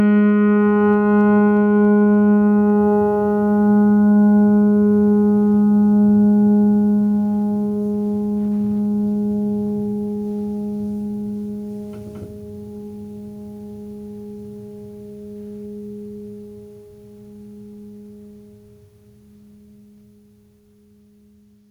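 Gain pumping runs through the whole piece of music. The level ducks around 5 dB under each loud sound, likely from gain set far too high into a fast limiter. The waveform looks flattened, and the spectrogram brightens and dims with each peak.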